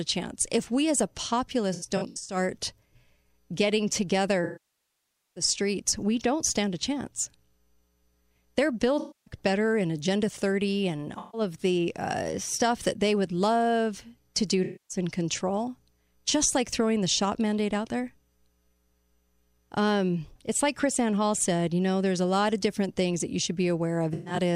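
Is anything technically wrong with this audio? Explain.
Yes. The speech has AAC frame loss with concealment at 1.73–2.36 s, 4.44–5.44 s (before "streets we don't stand"), 8.99–9.34 s, 11.18–11.41 s (before "of the uh stuff"), 14.64–14.97 s and 24.13–24.37 s (after "things that you should"). The decoder rebuilds the missing frames from the last good spectrum, so the short gaps sound smeared and phasey rather than cutting to a hard digital mute. The roughly 0.9 s loss at 4.44 s decays toward silence and fades back in.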